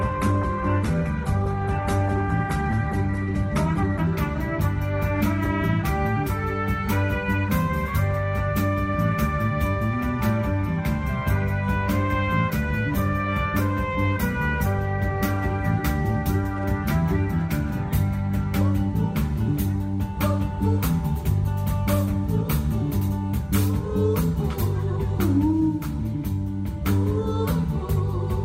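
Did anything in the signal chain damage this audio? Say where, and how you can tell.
Yes. An adaptive stream starting at a low bitrate affects playback from 0.0 to 4.0 s. Treble is absent above 12.1 kHz and codec artefacts are stronger. At 4.0 s quality jumps with no gap, which fits an Opus stream stepping from 16 to 64 kbit/s once bandwidth was measured.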